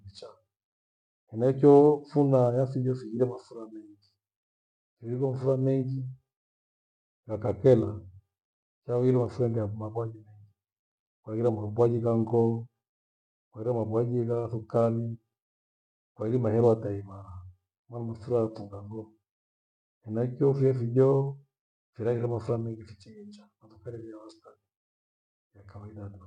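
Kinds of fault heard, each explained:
Rebuffering stall: playback runs dry at 6.46 s, holds silent for about 0.45 s, then resumes the speech exactly where it stopped, adding time without losing content.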